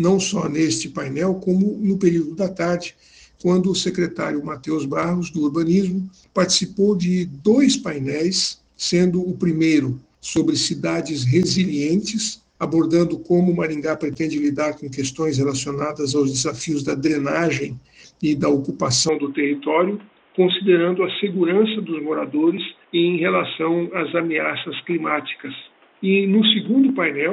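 At 19.09 s the sound turns dull and boxy and stays that way to the end of the clip. From that point nothing is present above 3.8 kHz, with no gap at the transition and little change in level, but a different background noise appears some 35 dB below the signal. The abrupt shift in bandwidth, tone and noise floor is likely an input switched to a poorer device partway through the recording.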